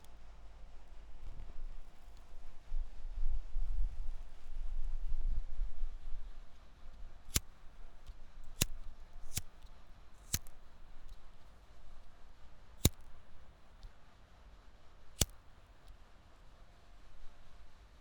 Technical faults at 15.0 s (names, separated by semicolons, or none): none